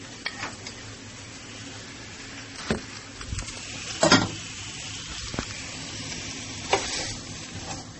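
Likely transcoding between lossy codecs, AAC then MP3, each at a low bitrate around 32 kbit/s: stacked smearing and swirly artefacts throughout, with nothing above 8.4 kHz.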